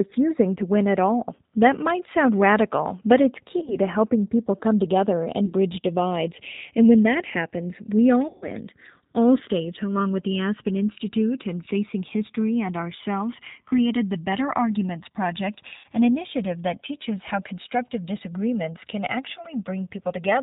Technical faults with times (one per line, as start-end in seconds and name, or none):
0.00-20.42 G.729 codec
3.59-3.76 VoIP packet loss concealed by the speech codec
5.46-5.53 VoIP packet loss concealed by the speech codec
8.28-8.49 VoIP packet loss concealed by the speech codec
15.77-15.86 VoIP packet loss concealed by the speech codec